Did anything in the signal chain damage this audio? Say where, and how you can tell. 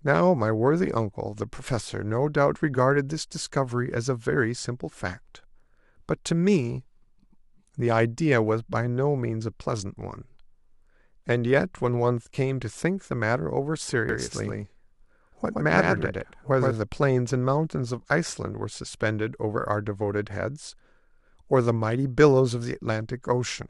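Yes: doubled audio track, 14.09 to 16.71 s. A dry copy trails around 100 ms, about 5 dB down, cutting in abruptly. Likely a slower capture path.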